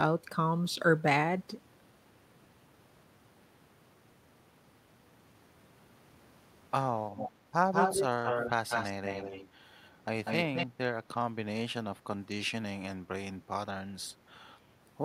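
From 7.15 to 10.67 s there's an echo leak: a copy of the speech trailing about 194 ms behind, in bursts at 7.15, 7.72, 8.69, 9.75 and 10.24 s. It ranges from nearly as loud as the speech to barely audible, likely a loudspeaker echo the canceller missed.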